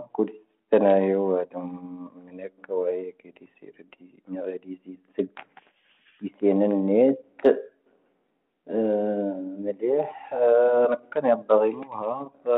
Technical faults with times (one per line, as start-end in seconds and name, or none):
none